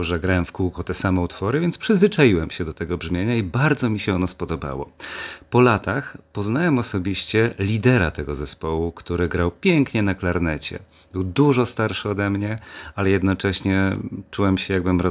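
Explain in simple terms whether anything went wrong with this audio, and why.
Nothing went wrong with this recording. The speech comes through without any technical fault at any point.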